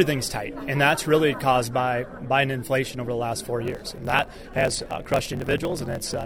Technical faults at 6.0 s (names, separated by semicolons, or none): block size mismatch (truncated)